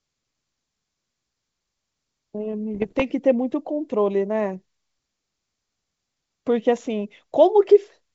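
Speech over what sounds like a G.722 wideband link, with a burst of bit errors on the ADPCM link from 2.75 to 3.03 s. You get pops and gritty crackle with the level jumping around, because each flipped bit throws off the decoder's step size and predictor, so the damage rings on briefly. It sounds like an error rate of roughly one percent.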